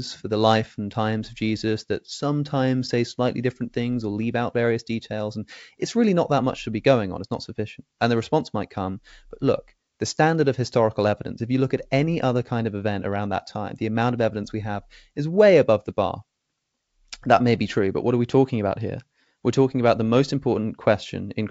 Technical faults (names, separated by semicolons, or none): none